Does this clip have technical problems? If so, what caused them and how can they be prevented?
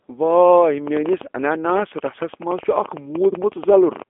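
Yes. The speech carries the sound of the G.729 codec from start to finish. Nothing comes through above 3.5 kHz, and the low end thins out below about 250 Hz. That is a narrow telephone band. The voice also sounds rough and slightly synthetic. This codec rebuilds speech from a vocal tract filter, a pitch predictor and a few pulses per short frame, and that coarse model is plainly audible here. The sound fits the 8 kbit/s G.729A variant. To prevent it, record locally or use a wideband codec such as Opus instead of a narrowband VoIP link.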